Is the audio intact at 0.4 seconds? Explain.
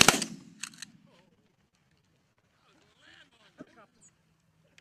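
Yes, the audio is intact at 0.4 seconds, with no dropout, click, distortion or other fault at that moment.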